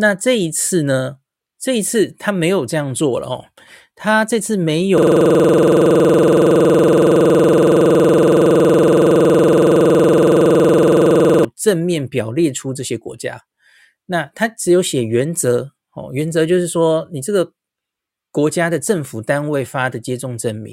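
Speech clip with a system hang loop from 4.98 to 11.45 s. One 46.44 ms slice repeats exactly, giving a 21.5 Hz machine-gun stutter. That fits a frozen 2048-sample ring buffer.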